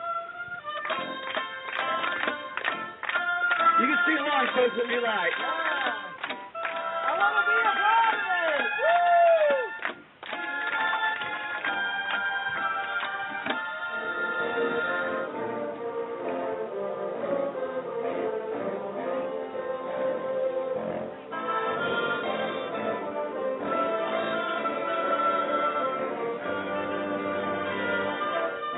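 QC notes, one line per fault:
Nothing stood out on listening, with no audible problem at any point in the audio.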